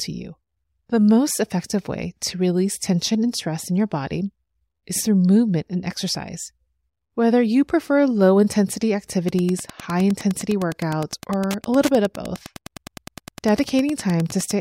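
From 9.22 s, right after "you prefer low intensity", Wi-Fi interference runs to the end of the speech clip. A nearby Wi-Fi radio's beacon, sent every 102.4 ms, is rectified by the audio circuit, giving a steady ticking close to ten times a second, roughly 20 dB below the speech. On a spectrogram it appears as evenly spaced thin vertical broadband lines; the waveform shows matching regular small spikes.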